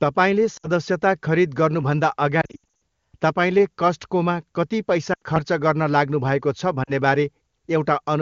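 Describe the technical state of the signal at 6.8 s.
Lost AMR speech frames from 6.84 to 6.91 s: about 40 ms, fitting two frames, is concealed by repeating the last good parameters with falling gain, giving a brief dip toward near silence.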